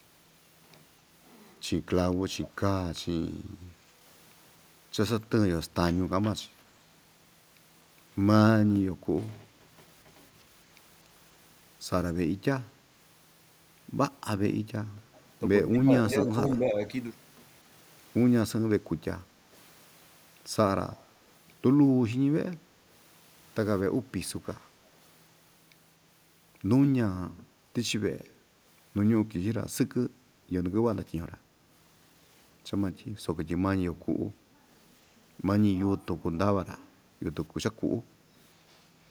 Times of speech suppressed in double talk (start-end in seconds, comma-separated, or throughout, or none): 15.73-16.76